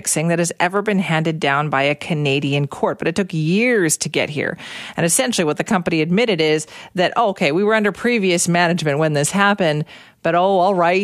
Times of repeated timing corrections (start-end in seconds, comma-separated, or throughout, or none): none